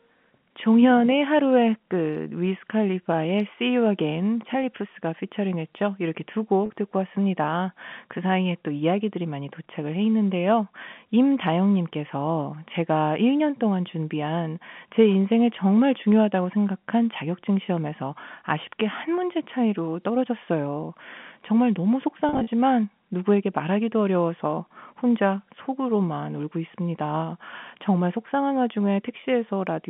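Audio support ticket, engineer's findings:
Packet loss with pitch repetition at 6.66–6.70 s: 40 ms gap bridged by a held, buzzy repeated pitch period. Again 22.29–22.47 s: 120 ms lost across 180 ms, longest 40 ms run. Gaps fit 10 ms packets. Jitter buffer concealment.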